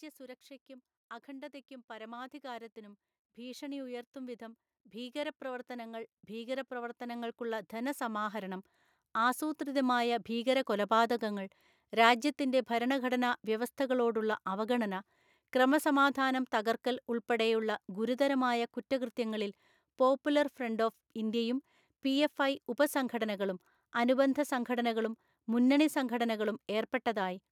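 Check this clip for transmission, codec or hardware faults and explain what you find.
One hardware-side fault stands out. Automatic gain rising, from 1.25 s to 10.33 s: the gain control judged the input too quiet and kept raising its gain, by about 18 dB. The speech and the background noise swell together, climbing steadily over those nine seconds.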